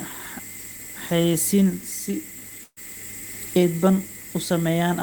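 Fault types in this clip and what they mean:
Burst of packet loss: At 2.63 s, about 140 ms of speech never arrives. The receiver repeats the last sound and fades it for about 130 ms. The gap also includes about 50 ms of silence. The speech resumes at 2.78 s, with that stretch missing.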